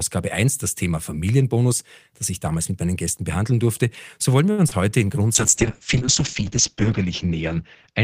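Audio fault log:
4.51–4.60 s, short stall from a late packet: a sound is held too long for about 66 ms, with a slight buzz or dip, and then the speech carries on from the same point. A packet arrived late, the jitter buffer ran dry, and the receiver stretched the last sound until the packet came in. Nothing is lost, but the delay grows by about 66 ms.
4.68–4.73 s, short concealed packet loss: there is a brief smear or wobble, and about 40 ms of speech is gone. The receiver filled part of the gap by extending the last sound, following its pitch if voiced or shaping noise if not, then blended back into the real audio.
5.37–8.04 s, call bitrate drop: the speech turns rough and muffled, losing everything above 8 kHz. The estimated bandwidth fell, so the encoder dropped from 40 kbps to 7 kbps, coding more coarsely and cutting the high band. The lowest rate lasts about 1.5 s.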